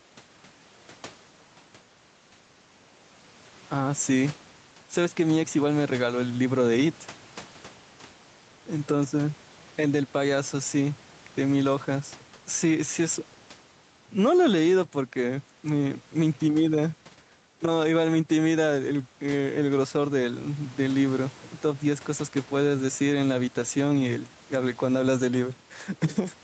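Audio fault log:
Throughout, gain pumping: the gain swings by around 5 dB, pulled down under each loud stretch of speech, with the room noise sitting about 31 dB below the talker. Loud and quiet passages sit squashed close together in level. The likely cause is microphone gain set far too high, with a fast limiter or compressor clamping it down on every peak and releasing in the gaps; the call processing passes nothing above 8 kHz.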